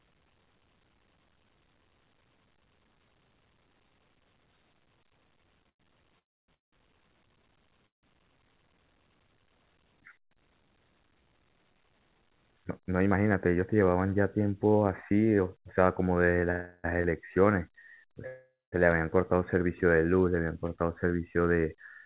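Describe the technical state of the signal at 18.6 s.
Packets were likely held up and the jitter buffer ran empty, causing a call audio freeze from 18.27 to 18.74 s. The last sound is stretched into a fading fill that drops to silence, and the speech resumes intact but about 0.46 s late.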